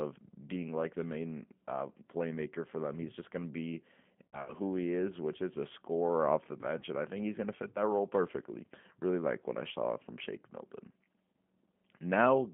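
The speech passes through a G.729 codec for the whole clip, rebuilt from a vocal tract filter and sparse pulses at a rate that fits 8 kbit/s. Only 150 Hz to 3.4 kHz survives, and the voice sounds plainly rough and synthetic.

VoIP packet loss concealed by the speech codec occurs from 4.28 to 4.54 s and again from 6.80 to 6.84 s. In the first gap about 100 ms of audio is missing, scattered over 200 ms with the longest run 60 ms. The second loses about 20 ms, one packet's worth. Each time the decoder extends its last pitch and filter into a fading buzzy tone or coloured noise, and the voice stays weakened briefly afterward.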